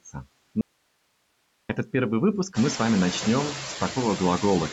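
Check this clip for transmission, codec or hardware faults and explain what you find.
Two faults stand out in this speech clip.

From 0.61 to 1.69 s the speech vanishes for about 1.08 s, leaving only faint hiss far below the voice, until "этот первый выпуск мы" resumes abruptly: likely an audio dropout to a faint residue.

Throughout, background noise sinks between phrases and rises under the voice: noise suppressor artifacts, from frame-by-frame cutting of noise-dominated bands by about 21 dB.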